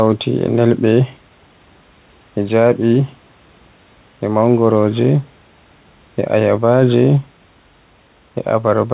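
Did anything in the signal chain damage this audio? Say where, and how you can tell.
No, nothing in the chain damaged this speech; the narrowband call path with nothing above 4 kHz, which fits G.711 A-law at 64 kbps, and the room noise sitting about 38 dB under the voice are simply how the recording and the line are meant to sound.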